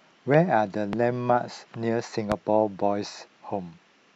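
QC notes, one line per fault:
0.93–0.96 s and 2.32–2.34 s, loud pop: a single sharp pop each time, roughly 15 dB above the speech, which continues underneath, likely from a voltage spike such as a switch or static discharge.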